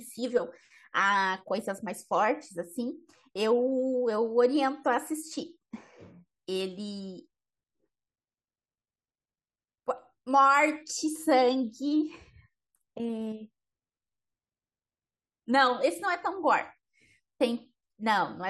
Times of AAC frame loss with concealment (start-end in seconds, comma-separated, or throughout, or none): none